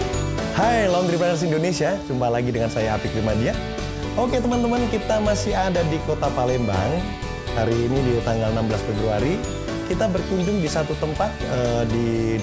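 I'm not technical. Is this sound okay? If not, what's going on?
Yes, it's fine: nothing in it sounds broken or glitchy, so you can relax about this one.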